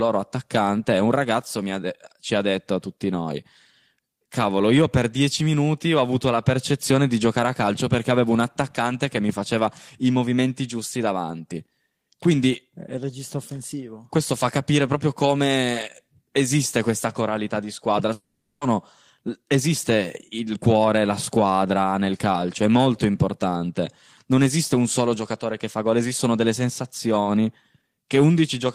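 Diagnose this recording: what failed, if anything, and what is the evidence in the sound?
The network stage failed with a long network dropout. Right after "questa coralità di squadra", at 18.13 s, the speech turns into a fading buzz for about 480 ms. Then about 50 ms of silence follows, and sound resumes at 18.64 s. The likely cause is lost packets, with the receiver concealing the gap before going quiet.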